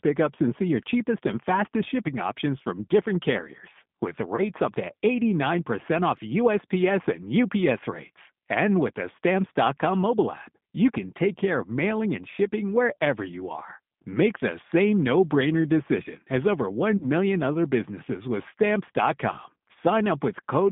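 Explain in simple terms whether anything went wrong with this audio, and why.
G.729 codec, throughout: this low-rate phone codec rebuilds the speech from a simple model, so it sounds thin, slightly rough and synthetic, with no high frequencies.

VoIP packet loss concealed by the speech codec, at 4.36–4.46 s and 16.97–17.07 s: about 20 ms and then 40 ms of audio went missing. The decoder filled each gap by stretching the last sound into a fading buzz or noise, and the speech stays briefly weak afterwards.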